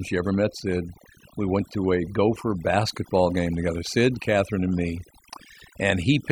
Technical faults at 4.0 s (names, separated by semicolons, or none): overdone noise removal